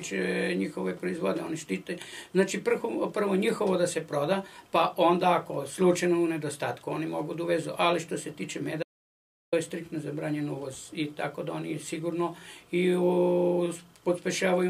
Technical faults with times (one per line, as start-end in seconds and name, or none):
8.83-9.52 audio dropout to silence